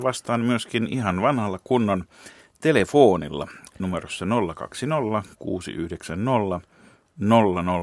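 No technical faults detected.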